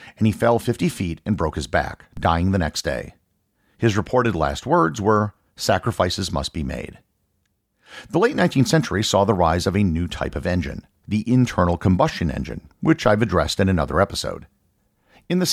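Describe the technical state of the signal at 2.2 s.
Right at 2.17 s, between "and broke his back" and "dying the next day", there's a DC step: the waveform's zero line suddenly jumps by about -26 dBFS, then drifts back as a 5 Hz high-pass bleeds it off. You hear it as a brief low thump.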